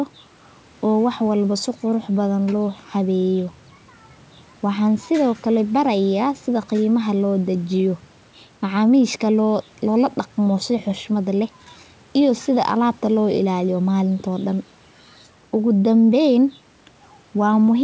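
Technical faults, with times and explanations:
No technical faults can be heard in this speech recording. It carries the band limit of a call path, with nothing above 8 kHz, and the G.722 wideband telephone coding at 64 kbit/s leaves at most a faint trace.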